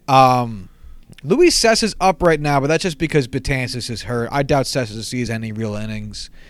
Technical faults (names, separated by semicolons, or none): loud pop